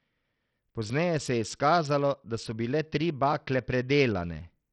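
From start to finish the speech carries heavy codec damage, likely from Bluetooth SBC compression. The treble is thin and unstable, flickering in and out, and a gritty, grainy noise with aliasing rides on the voice. That pattern points to a starved bit pool, roughly in line with a 64 kbps stream: the upper sub-bands get few or no bits, and the lower bands are quantised so coarsely that the error becomes audible.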